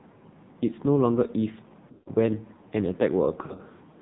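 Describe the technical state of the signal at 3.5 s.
At 3.5 s the signal sits inside a burst of lost AMR speech frames running from 3.46 to 3.81 s. The decoder fills each gap by repeating the last pitch and vocal-tract settings at falling gain, so the speech warbles, stretches and dips. The pattern points to about 180 ms missing across roughly 360 ms, in runs no longer than about 60 ms, so the sound weakens briefly rather than fading fully to silence. Underneath, the whole passage carries AMR narrowband mobile codec coding. Nothing above 4 kHz survives, and the heavy, buzzy, synthetic texture points to a low bitrate near 5.9 kbps.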